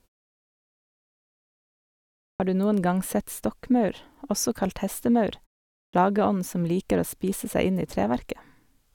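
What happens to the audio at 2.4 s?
Right around there you get a clipped start after a pause. The sound comes back in at 2.35 s after roughly two and a third seconds of silence, and the first 48 ms or so, up to 2.40 s, just isn't there. The output side seems to have dozed off during that long quiet stretch and needed a moment to wake back up, so the speech pops in abruptly, missing its opening sounds.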